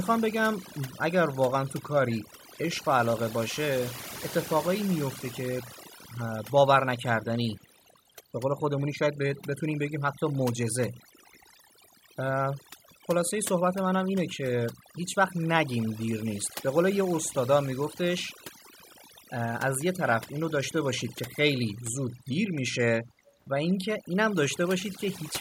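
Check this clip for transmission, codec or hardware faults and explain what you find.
Two kinds of fault are present: processing damage across the whole clip and two brief echoes.

From start to finish the speech is affected, with near-silent gaps between phrases sprinkled with twinkling specks. This is overdone noise removal. The noise suppressor was set so aggressively that it switched off individual frequency bands whenever they came close to its noise estimate. That cleared the background noise, but it also stripped away quieter parts of the voice and left isolated bands flickering in the pauses.

From 2.28 to 2.49 s, and again from 7.58 to 7.66 s, a very faint, scrappy repeat of the voice trails the original by about 155 ms and sits far below the speech in level. The likely cause is echo leak: at the far end the call was played on a loudspeaker, and that end's echo canceller failed to remove everything its microphone picked up. 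The residue was sent back as a delayed copy.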